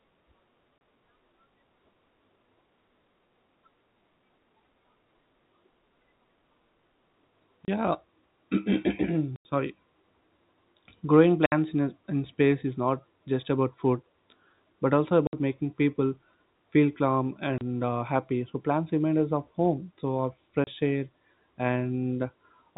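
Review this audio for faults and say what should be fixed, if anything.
The speech is chopped by abrupt dropouts with hard edges at 0.78–0.81, 7.65–7.68, 9.36–9.45, 11.46–11.52, 15.27–15.33 (between "but also" and "making people feel calm"), 17.58–17.61 (before "uh happy") and 20.64–20.67 s. These are packet loss filled with silence. Each gap is 30, 60 or 90 ms, which points to 30 ms packets lost singly or in runs, with the receiver inserting silence where they should be. The G.711 telephone band underneath is intact. Enabling packet loss concealment and a jitter buffer, or adding forward error correction, would smooth over these holes.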